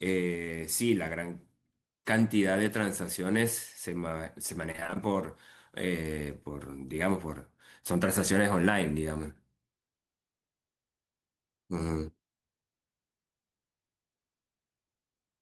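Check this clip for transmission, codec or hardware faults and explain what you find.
There is one transmission fault in this speech clip. From 4.71 to 4.97 s there is repeated packet loss (robotic sound). Seven short gaps, the longest about 25 ms, were each patched by extending the preceding audio. About 46% of that span is concealment, so the sound turns choppy, with pieces missing.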